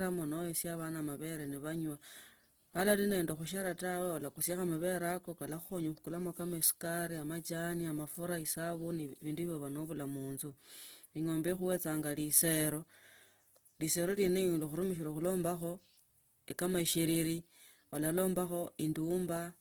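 Speech runs through the whole clip with plainly audible Opus compression damage, likely from its music (CELT) mode at a very low rate, which fits something around 16 kbps. The coder holds the energy in each band and papers over starved ones with folded or noise-like content, so voiced sounds come out rough and grainy rather than swirly. Unlike MP3 artefacts there are few spectral holes, and unlike the speech mode the sound isn't muffled, since content reaches about 20.2 kHz.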